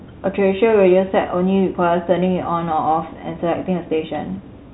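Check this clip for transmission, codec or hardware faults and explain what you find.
The speech arrives over G.711 telephone coding, with nothing above 3.9 kHz and only the faint level-following quantisation hiss of 8-bit logarithmic coding, consistent with a 64 kbps A-law line, and there are no faults to report.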